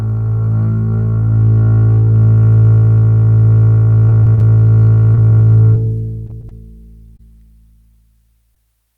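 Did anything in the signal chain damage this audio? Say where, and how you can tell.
Yes. The network stage damaged this music. Repeated packet loss (robotic sound) hits 4.09 to 4.43 s and 6.27 to 6.53 s. Each stretch has four gaps of up to about 20 ms, and about a quarter of each span is concealed. The receiver keeps continuing the last sound into each hole, so the music turns choppy.

Short concealed packet loss also shows up as brief smears or wobbles at 5.15–5.19 s, 5.75–5.85 s, 7.17–7.21 s and 8.55–8.58 s. Each time roughly 20 ms of audio failed to arrive. The decoder extended the preceding sound across the hole and then blended back into the real signal.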